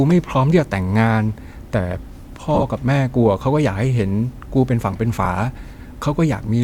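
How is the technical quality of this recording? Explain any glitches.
The recording has two short dropouts from lost LE Audio frames. Between 2.55 and 2.63 s, about 52 ms of audio went missing in small gaps spread over roughly 75 ms, the longest around 15 ms. That pattern fits seven lost 7.5 ms frames. A single frame drops at 5.25 s. Each time, the LC3 decoder refilled the gap by replaying the last spectrum with random signs. The tonal parts of the speech smear briefly into a rough, noisy blur. The light codec compression leaves little trace.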